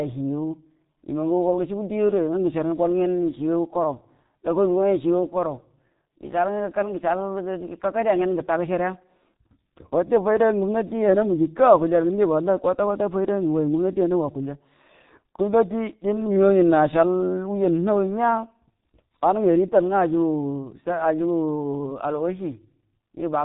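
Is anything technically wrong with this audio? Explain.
Yes. Throughout the speech, the G.723.1 codec has heavily degraded the sound, which fits its low-rate mode at around 6 kbit/s. It models the voice in 30 ms frames and updates that model slowly, so consonants smear and the voice turns muffled and hoarse. On a spectrogram, everything above 3.8 kHz is empty, and fricatives lose their sharp onsets. In the waveform, transients look rounded, with a coarse, frame-stepped texture.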